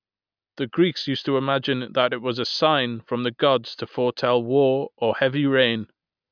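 No technical faults can be heard anywhere in this recording.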